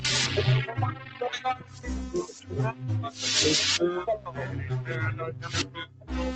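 What you're hearing is a speech-style noise suppressor left running on non-speech audio. It keeps mistaking steady tones, ambience and tails for noise and pulling them down, so the level pumps and flutters by around 10 dB while attacks punch through. On top of that there are distinct spots where the suppressor cut the sound hard: 0.92 to 1.21 s (about 8 dB down), 1.55 to 1.86 s (about 9 dB), 4.19 to 4.34 s (about 7 dB) and 5.32 to 6.1 s (about 9 dB), where sustained parts sink and decays get chopped short. Nothing reaches above 8 kHz, which fits the call codec's bandwidth.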